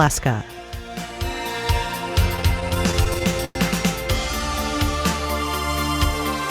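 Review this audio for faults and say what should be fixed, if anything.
Repeated stalls (stutter) run from 2.19 to 3.58 s. The jitter buffer keeps emptying, so the sound repeats and drags, with the longest hold about 105 ms. A deeper adaptive jitter buffer would prevent this.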